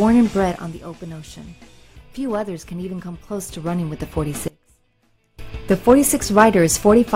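From 3.24 s to 4.28 s, a gain change of roughly 10 dB is applied in coarse steps with no smoothing between them, about fifty a second. Each jump puts a tiny discontinuity in the waveform, so the move is heard as zipper noise: a fast ticking or buzzing texture riding on the sound for that second while the level slides, rather than a clean fade.

At 4.48 s the signal path likely loses its input while everything downstream stays live, an audio dropout to a faint residue. For 0.90 s, until 5.39 s, the full sound vanishes abruptly and only a faint trace remains, about 25 dB below normal level. It then snaps back just as suddenly. The hard edges at both ends set it apart from a pause or a fade.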